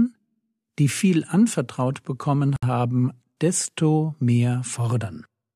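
At 2.56 s, a 64 ms gap opens in continuous sound. This is a gap at a join of encoded pieces: untrimmed encoder delay and padding leave a gap, its edges smeared by the codec, before the sound resumes.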